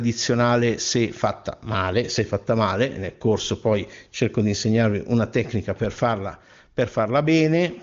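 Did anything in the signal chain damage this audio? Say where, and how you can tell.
No, nothing in this speech stood out on listening as damage from any stage of the chain.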